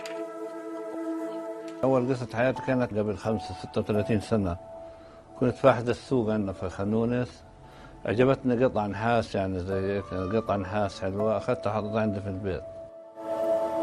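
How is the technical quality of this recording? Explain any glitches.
The recording has one clear quality problem: a stretch where the stream drops to a lower bitrate. From 2.29 s to 8.29 s, about 6 s, coding artefacts become more audible. The change in quality is abrupt at both ends and there is no gap in the audio. When the connection slows, an adaptive stream switches to a cheaper encoding and then steps back up. Here the drop sounds like a move from roughly 64 kbit/s Opus to roughly 24 kbit/s.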